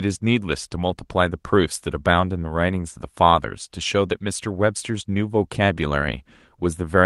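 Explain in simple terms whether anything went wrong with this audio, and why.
Nothing went wrong here: the speech went through a normal internet call connection, which leaves out the very highest sounds above about 12 kHz and adds a touch of its usual compression texture, and that's simply how calls sound.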